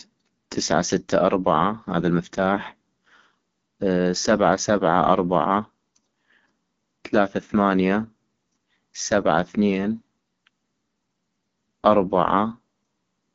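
Throughout, AMR wideband (HD Voice) coding makes the speech rough and raspy, fitting its low 8.85 kbit/s mode; a spectrogram shows nothing above 7.5 kHz.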